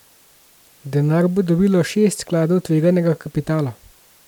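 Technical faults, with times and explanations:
Nothing in this speech recording warrants a fault entry at any point.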